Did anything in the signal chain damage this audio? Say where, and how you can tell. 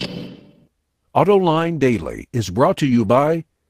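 Yes, lost packets rebuilt from error correction at 1.55 to 2.21 s and 2.83 to 3.33 s, a network-stage fault. The speech never drops out but turns rougher and noisier there, because the decoder played the low-bitrate copies carried in the following packets.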